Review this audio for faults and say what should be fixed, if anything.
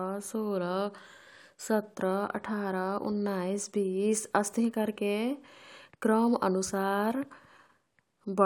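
Nothing needs fixing: the speech signal shows no technical faults that a listener would pick up anywhere in the recording.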